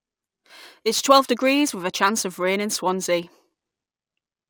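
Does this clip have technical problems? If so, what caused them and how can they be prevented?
Yes, there's sample clock jitter running through the whole speech clip. The converter's clock is wobbling, so each sample lands a touch early or late, on the order of several microseconds. Since the timing error bites hardest where the waveform changes fastest, you get a gritty hiss riding on the louder and brighter parts of the speech, sitting maybe 20 dB under the signal, and it drops away in the pauses. To prevent it, clock the converter from a clean, low-jitter source and keep that reference well isolated from noisy digital lines.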